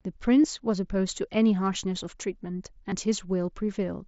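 At 0.43 s and again at 2.18 s, concealed Bluetooth headset packet loss fills roughly 15 ms of missing speech, which fits two lost frames, with copied waveform. Each is a brief buzzy tone, smoother than a stutter. At 2.90 to 2.92 s, a repeated buffer plays the same 10 ms slice twice more with hard joins, dropping around 20 ms of new audio. It sounds like a brief buzzy click rather than a blended patch, on top of the light grain of the mSBC headset codec.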